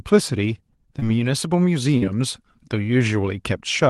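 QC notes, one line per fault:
0.99–1.04 s and 1.98–2.03 s, short concealed packet loss: About 20 ms and then 40 ms of audio arrived too late to decode. The receiver extended the preceding sound to cover each gap and blended back in, leaving a brief smear or wobble. The second gap is longer.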